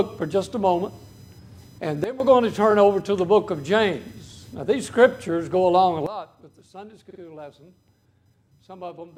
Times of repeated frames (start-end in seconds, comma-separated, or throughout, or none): 2.70-2.73, 7.09-7.19